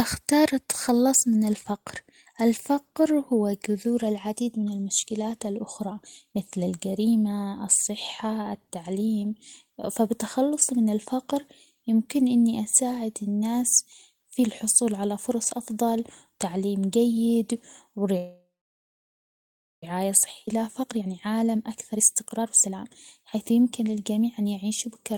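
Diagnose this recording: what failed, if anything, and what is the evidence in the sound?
Call audio freeze at the network/buffer stage, 18.17–19.84 s: sound smears into a fading buzz, then 1.37 s of flat waveform; likely packets delayed, jitter buffer emptied, 1.65 s inserted.

Skip ahead at the network/buffer stage, 20.46–20.49 s: roughly a second of audio dropped, sides butt-joined, seen as an abrupt discontinuity with spectral edges mismatched.

Jitter buffer speed-up, 20.82–24.47 s: audio runs at 117% with unchanged pitch, about 0.7 s trimmed; spectrogram harmonics stay level while syllable spacing compresses.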